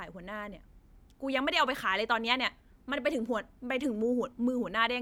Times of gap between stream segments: none

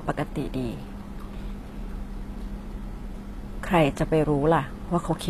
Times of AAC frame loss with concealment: none

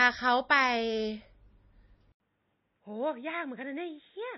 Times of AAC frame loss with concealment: none

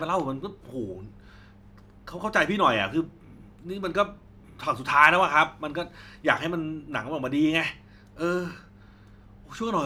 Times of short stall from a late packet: none

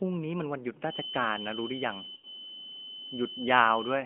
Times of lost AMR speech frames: 2.16-2.26

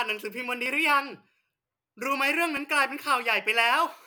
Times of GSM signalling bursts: none

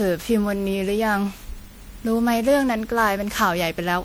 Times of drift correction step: none

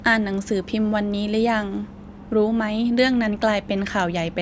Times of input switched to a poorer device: none

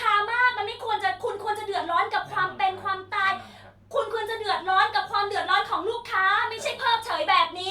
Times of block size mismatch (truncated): 6.36-7.71

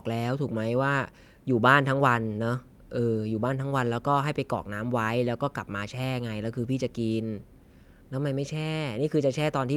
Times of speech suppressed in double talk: none

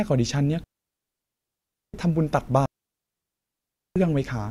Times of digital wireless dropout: 0.64-1.94, 2.66-3.96

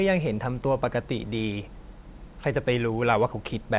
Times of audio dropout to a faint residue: none

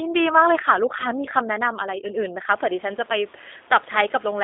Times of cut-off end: none

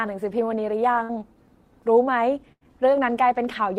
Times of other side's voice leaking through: none

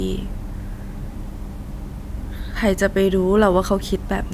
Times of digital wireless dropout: none

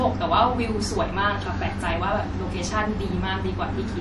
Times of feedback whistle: none

